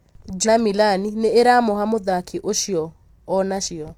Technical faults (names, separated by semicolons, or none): damaged data in a compressed stream